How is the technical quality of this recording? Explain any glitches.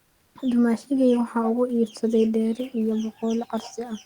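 One glitch stands out at the very start. Comfort noise in place of the background runs from 0.03 to 0.35 s. For about 320 ms the room noise, which otherwise sits roughly 42 dB below the speech, gives way to a flat, featureless hiss about 6 dB quieter. This is likely the sender's discontinuous transmission, as with Opus DTX, pausing during silence while the receiver substitutes synthetic noise.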